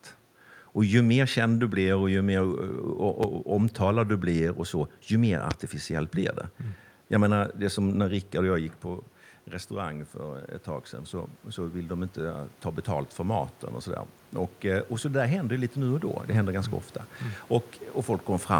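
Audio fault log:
3.23–3.26 s and 5.51–5.54 s, loud pop: single sharp pops peaking about 10 dB and 15 dB above the speech, which continues underneath, likely from a switch or static discharge.
9.69–13.6 s, automatic gain rising: after the input falls by about 10 dB, gain climbs 6 dB over several seconds, swelling voice and room noise together, unlike a talker moving.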